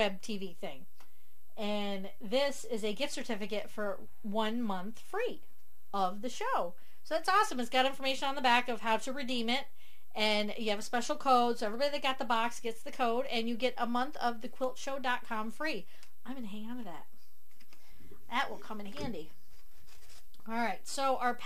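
No technical faults can be heard anywhere in the recording. Nothing in the audio calls for a timestamp or a fault description.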